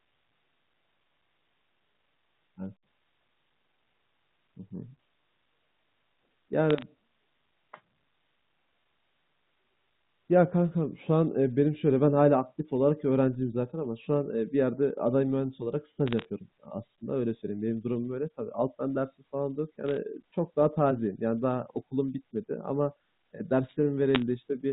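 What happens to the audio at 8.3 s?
Nothing goes wrong at 8.3 s: the speech carries on intact through that moment, with only the narrow telephone band of the G.711 coding and its faint quantisation hiss beneath the signal.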